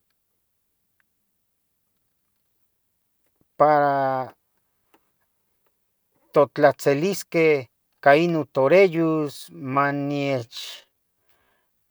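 At 8.91 s the speech abruptly drops to about 0.59 times its previous pace and stays there to the end of the clip, while the pitch does not fall with it. This is a time-stretched section. The likely cause is software lengthening that stretch of audio to fill a set duration, holding the pitch by repeating short slices of the waveform. The slowed speech drags.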